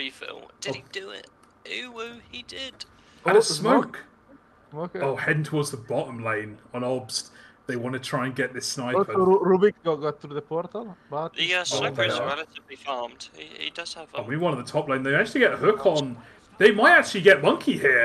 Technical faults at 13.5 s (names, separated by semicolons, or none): none